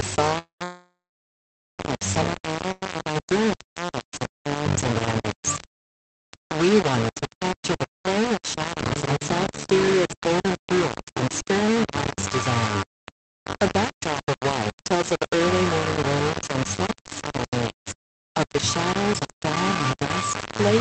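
The audio came through an Opus call path, which limits it to about 8 kHz, and it was likely reduced to a very low bit depth without dither, something like 3 bits with rounding. The rounding error tracks the signal at nearly its own level, so the whole clip is coarse and gritty, and the grain shifts with the sound. A call audio freeze, likely from delayed packets draining the jitter buffer, stalls playback at 0.38 to 0.62 s, 0.64 to 1.80 s and 2.72 to 2.83 s. The last sound stretches out and fades to silence in the two longer gaps (for about 0.1 and 0.8 s), then resumes where it stopped with nothing lost. Jitter buffer speed-up trims pitch-period slices to cut the built-up delay, so the audio runs faster at the same pitch, about 6% faster from 14.38 to 15.38 s and 5% from 16.96 to 18.57 s, dropping roughly 70 and 100 ms.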